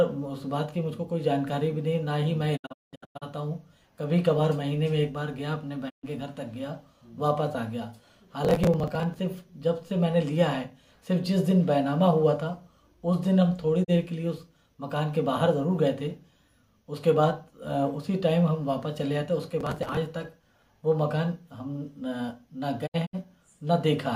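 At 2.56 to 3.24 s the receiver suffered a digital broadcast dropout, losing frames and muting with fades of about 20 ms. The sound breaks into several holes totalling 480 ms, the longest 192 ms, consistent with roughly 32 ms frames. Shorter mutes follow at 5.88 to 6.05 s (128 ms) and 13.83 to 13.90 s (32 ms). From 8.45 to 9.19 s and again from 19.61 to 19.97 s, processor overload crackle appears: the processor missed a run of deadlines for buffers of a few milliseconds, and each skipped buffer leaves a hard-edged gap, heard as gritty tearing over the sound. A final scattered dropout at 22.86 to 23.15 s punches short holes totalling 128 ms.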